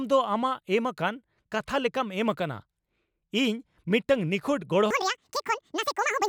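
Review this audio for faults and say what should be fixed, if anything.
Section at the wrong speed from 4.91 s to the end at 6.29 s, right after "ᱤᱧ ᱢᱤᱫᱴᱟᱝ ᱱᱤᱠᱷᱩᱛ": the speech runs at twice its recorded speed and rises about ten semitones, likely from that stretch being played or rendered against the wrong clock. To prevent it, make sure every segment uses the same sample-rate and clock setting when it is edited and exported.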